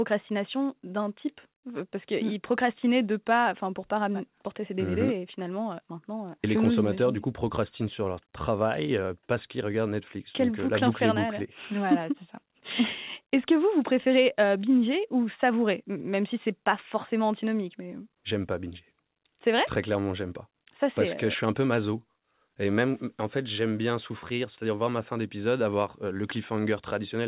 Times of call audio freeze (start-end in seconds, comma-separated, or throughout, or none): none